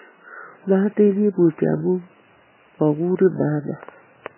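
Speech that sounds muffled and watery throughout, with nothing above 3 kHz and swirling, chirpy artefacts, likely from heavy MP3 compression at a very low bitrate.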